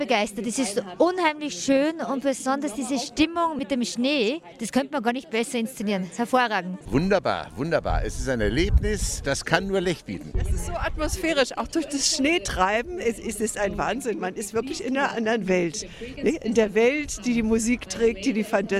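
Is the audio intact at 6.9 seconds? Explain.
Yes, the audio is intact at 6.9 seconds, with no fault audible at that moment.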